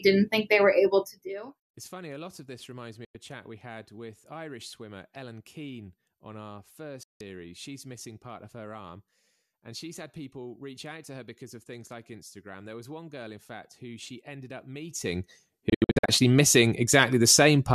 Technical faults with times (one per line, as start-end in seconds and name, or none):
0.98-1.46 zipper noise
3.05-3.15 digital broadcast dropout
7.03-7.21 digital broadcast dropout
14.81-15.30 zipper noise
15.70-16.09 digital broadcast dropout